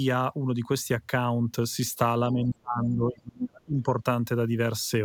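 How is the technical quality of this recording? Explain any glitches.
The recording has one clear fault: speech suppressed in double talk, from 2.32 to 3.89 s. The speech level falls sharply, by roughly 30 dB at its deepest, for about a second and a half. The likely cause is an echo canceller that heard both sides at once, could not separate this talker from loudspeaker echo, and attenuated everything.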